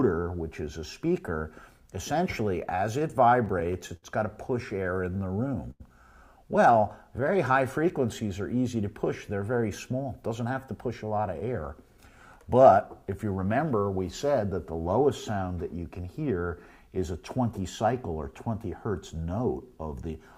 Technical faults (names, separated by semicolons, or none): repeated stalls (stutter); jitter buffer slow-down; short stall from a late packet; jitter buffer speed-up